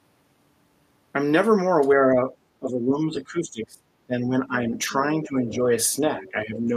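Speech suppressed in double talk first appears from 1.95 to 2.32 s, then from 2.59 to 3.84 s and 4.07 to 5.71 s, and again from 6.21 to 6.73 s. The talker's level sinks, by around 10 dB in the lighter stretches and as much as 20 dB in the deepest one, in uneven pieces totalling about a second in each of the two longer spans. This is likely an echo canceller caught with both ends talking, unable to tell its own talker from loudspeaker echo, and turning everything down.

The other side's voice leaking through shows up inside and just after those dips, as brief scraps at 4.85 to 4.92 s, 5.51 to 5.55 s and 6.17 to 6.31 s. They sit well under the talker, about 30 dB down in the first and about 20 dB down in the two later ones. The likely cause is the far end playing on the talker's loudspeaker, with the canceller leaving part of it in the microphone signal.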